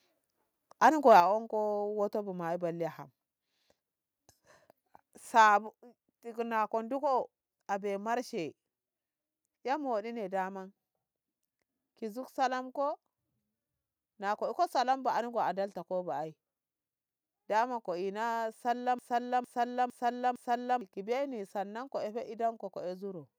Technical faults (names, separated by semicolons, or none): microphone overload; microphone volume stepped down; broken-record loop